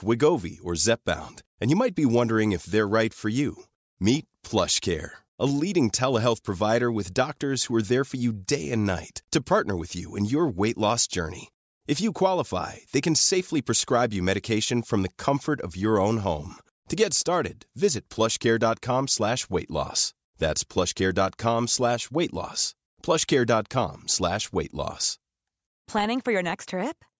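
Nothing in this bit of speech gives away a technical fault, so there's really nothing here to flag.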